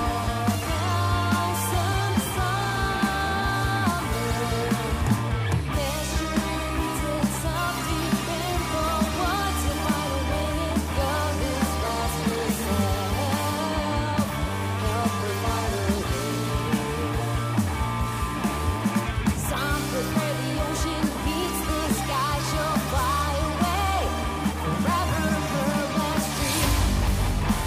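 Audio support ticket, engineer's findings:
Crude rate conversion, 23.75 to 26.68 s. Gritty, inharmonic fizz riding on louder and brighter passages. Nearest-sample resampling from 48 kHz to 44.1 kHz without filtering, so samples are periodically dropped. The resulting error sits roughly 20 dB below the audio. Spectrogram: faint aliased lines and a raised noise haze that track the strong components, not harmonically related to them. Waveform: small periodic step irregularities at the dropped samples.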